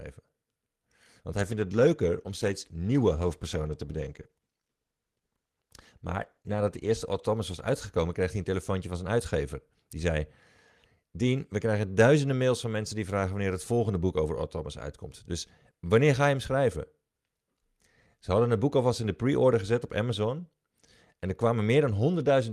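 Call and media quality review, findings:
Call bitrate drop, 1.35–9.17 s: speech turns rough and watery, worst for about 5.5 s, then recovers. Encoder side. The sound fits a bandwidth-estimate fall cutting the Opus rate from around 40 to 16 kbps. Coarseness with no gaps, unlike packet loss.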